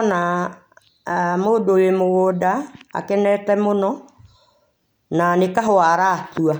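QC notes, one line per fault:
Nothing stood out on listening to this speech recording.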